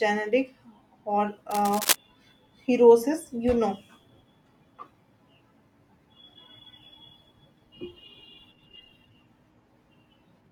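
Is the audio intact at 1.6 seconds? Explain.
No. From 1.50 to 1.96 s there is cable scratch noise, likely from a worn cable or connector being moved so its contact resistance jumped erratically. That injects dense, uneven noise bursts, heard as scratchy rustling over the speech at about 5 dB below it.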